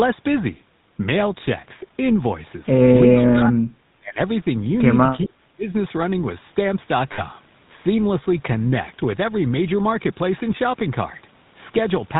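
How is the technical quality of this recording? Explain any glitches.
The quality is fairly rough: a constant coded-phone character plus a few short glitches.

Throughout, the GSM full-rate codec is clearly audible. It models the vocal tract and drives it with a sparse pulse excitation, passing nothing above 4 kHz, and that consistent with a 13 kbps stream. The result is a buzzy, gravelly roughness over all the speech.

From 3.12 to 4.19 s and again from 5.24 to 5.65 s, the speech is suppressed in double talk. The level drops by up to about 30 dB in the first stretch and about 35 dB in the second, which is likely an echo canceller ducking the talker while the far side spoke. Roughly a second of speech is affected the first time and about 0.4 s the second.

At 5.24 to 5.28 s there's an echo leak, a brief scrap of the voice coming back about 425 ms late and about 20 dB below the speech. That's likely a loudspeaker echo the far end's canceller didn't fully remove.

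At 7.12 s, lost GSM frames leave a 60 ms loss, which fits three missing frames. The decoder reused the last good frame's settings, so the sound hangs briefly as a rough, metallic ring instead of dropping out cleanly.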